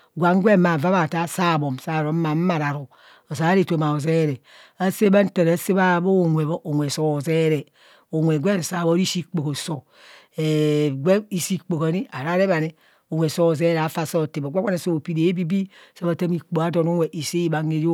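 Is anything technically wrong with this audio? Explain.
No, nothing technically wrong stands out here; the recording just carries on steadily without any glitches catching the ear.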